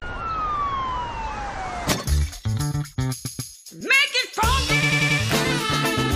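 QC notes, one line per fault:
3.24–3.52 s, repeated frames: a stutter as a 139 ms block plays twice more. Duplicated compressed frames add 279 ms.
4.82–5.19 s, repeated frames: a quicker stutter as a 93 ms block replays four extra times. The repeated frames lengthen the audio by 372 ms.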